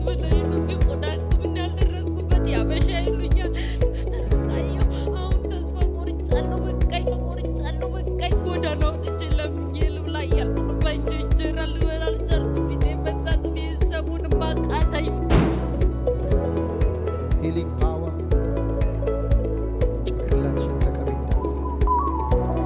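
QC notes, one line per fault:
No faults found in the audio. Nothing in the sound calls for a QC entry.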